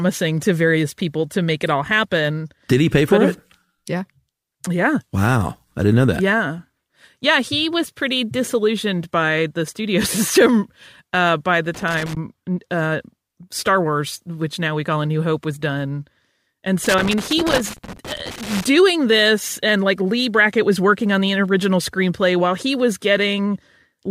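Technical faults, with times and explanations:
11.74–12.17 s and 16.84–18.64 s: loose connector crackle. Two irregular bursts of scratchy crackle break into the speech, the first lasting about 0.4 s and the second stretching to 1.8 s. A worn or dirty contact somewhere in the signal chain is flickering between touching and not touching as it shifts. That chops the audio on and off in ragged fragments, and any DC sitting on the line turns each make and break into a pop.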